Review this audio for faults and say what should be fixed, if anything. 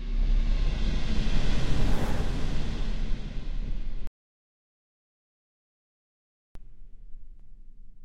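At 4.07 s the sound cuts off abruptly into silence, with no background noise at all, and resumes mid-flow at 6.55 s. This is an audio dropout to silence: about 2.48 s of input was lost, most likely through a disconnected device or failed link, while the recorder kept writing silence. To prevent it, secure the input cabling and connection and monitor levels during recording so a lost signal is noticed immediately.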